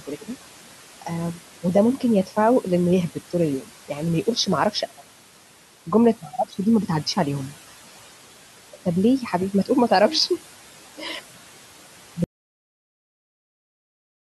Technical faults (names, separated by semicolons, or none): noise suppressor artifacts; audio dropout to silence